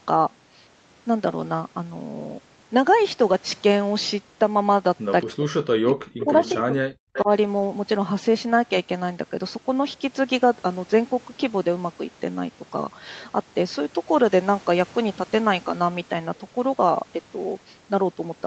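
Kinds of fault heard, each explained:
Speech suppressed in double talk: from 5.23 to 7.29 s the speech dips by roughly 40 dB in pieces, likely because the echo canceller muted the talker while both sides spoke; the waveform shows gaps and the spectrogram shows thinned, missing bands.
Echo leak: delayed copies lagging 225 ms sit at 6.2, 6.41 to 6.54 and 7.13 to 7.24 s, about 10 to 20 dB down, likely residual loudspeaker echo; on a spectrogram they are short delayed copies of a voice.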